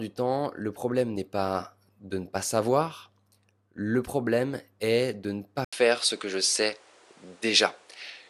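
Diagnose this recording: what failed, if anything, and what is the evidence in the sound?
At 5.65 s, just after "problème est de ne", an 80 ms gap gives way to duller speech with nothing above 11.4 kHz, a level shift of roughly 5 dB and new noise about 35 dB down, through the end. At the driver stage, this is likely an input switched to a poorer device.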